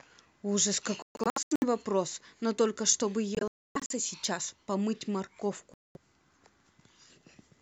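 Likely Bluetooth dropouts: packets reached the headphones too late and were discarded, so the speech cuts to silence in broken patches from 1.02 to 1.64 s and 3.35 to 3.92 s, then 5.74 to 5.97 s, resuming further on.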